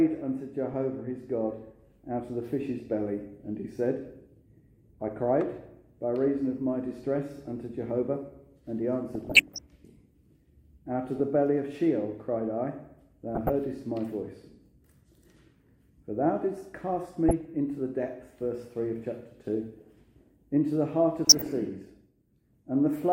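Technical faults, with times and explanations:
9.13–9.59 s, 11.16–11.20 s, 13.35–13.52 s, 17.29–17.45 s and 21.25–21.47 s, DAB burbling: short blips of noise and level jumps in single sub-bands over the programme. Weak reception lets bit errors, around a few tenths of a percent, slip past error correction, corrupting MP2 samples and scale factors so individual sub-bands jump in level for up to a frame.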